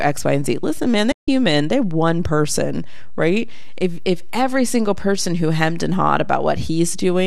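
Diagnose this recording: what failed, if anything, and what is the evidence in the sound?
AAC frame loss with muting, 1.12 to 1.28 s, between "and z listen man" and "they're one person right": a 0.16 s soft-edged dropout. It is a network-stage loss at the decoder, which zeroed the missing spectra. That hole fits a run of roughly sixteen short low-delay frames, and overlapping windows fade the speech out and back in. The light coding damage around it is likely from low-delay AAC coding.

DC offset, throughout the clip: the waveform sits on a constant shift away from zero. This points to the analogue front end or converter stage. It is not audible as tone but shows as steady energy at the very bottom of the spectrum and eats into headroom.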